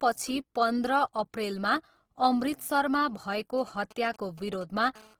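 Across the whole speech clip the sound has a grainy, rough texture, likely from Opus compression in its music-oriented CELT mode at a rate that fits about 16 kbps. Short of bits, the encoder keeps each band's energy but refills the detail with folded copies of lower bands or with noise. So the voice keeps its full bandwidth, with content reaching up to about 20.4 kHz, yet tones come out plainly coarse and noisy rather than swirling.

From 3.58 to 4.87 s, GSM signalling bursts break in. A nearby 2G phone is exchanging short groups of radio bursts with the network, as it does before a call or message, and the audio circuitry rectifies those pulses into sound. The result is a galloping dit-dit-dit of brief buzzes at about 217 Hz, sitting roughly 25 dB below the speech and unrelated to it.

From 4.96 to 5.15 s comes a steady GSM phone buzz. The phone has moved into continuous call transmission, bursting 217 times a second, and the rectified pulses now form an unbroken, hard, raspy buzz at about 217 Hz, rich in harmonics. 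It sits about 25 dB below the speech and carries on regardless of what is being said.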